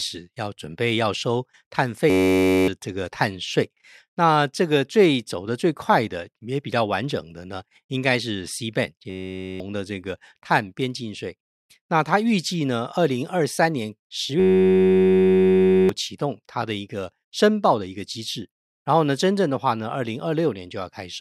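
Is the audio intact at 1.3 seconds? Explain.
Yes, the speech at 1.3 s runs through cleanly, with no dropout, click, distortion or other break at that point.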